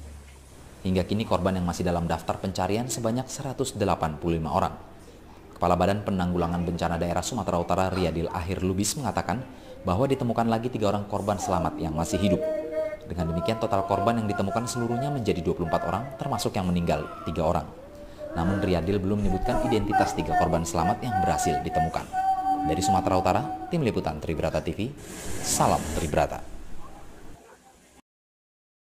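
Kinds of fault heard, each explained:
Crude rate conversion: unfiltered sample dropping, fitting a 48 kHz to 44.1 kHz change, adds gritty inharmonic fizz about 25 dB down, seen as stray spectrogram lines.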